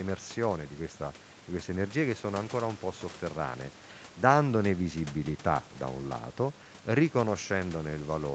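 No technical faults can be heard in this speech recording.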